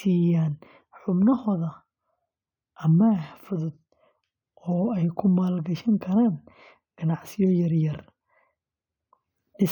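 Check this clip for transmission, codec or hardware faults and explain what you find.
Nothing in this speech recording points to a transmission, codec or hardware problem, so there's nothing to flag here.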